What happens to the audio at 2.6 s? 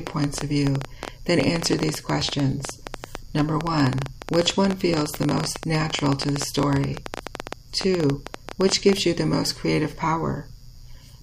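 At 2.6 s the sound is in the middle of a train of clicks running from 0.07 s to 8.94 s. Sharp pulses of similar shape arrive at about 12.5 per second, unevenly spaced, roughly a hundred in all, peaking around 15 dB above the audio. They are heard as ragged ticking over the sound and through pauses. The likely cause is interference or a faulty connection or power supply. A spectrogram shows thin vertical broadband streaks, and the waveform shows narrow spikes jutting past the signal.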